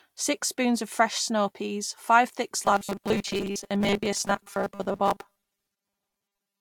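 From 2.62 s, right after "snow peas five thick", to the end at 6.61 s, the speech turns into a rigid, metallic buzz. This is robotic sound from repeated short buffers. A 5 ms slice likely repeats for most of the stretch, imposing a fixed 200 Hz buzz.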